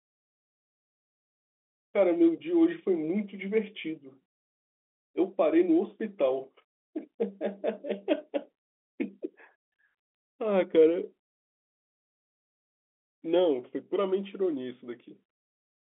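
No technical faults can be heard in the speech. It carries the narrow sound of G.711 telephone coding, with the band running from about 250 Hz up to 3.5 kHz and nothing audible above it.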